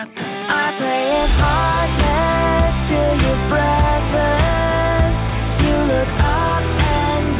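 No technical faults can be heard anywhere in this audio. It has passed through a WebRTC call path, and nothing sounds above 4 kHz, which fits the narrowband G.711 A-law codec used on ordinary phone calls.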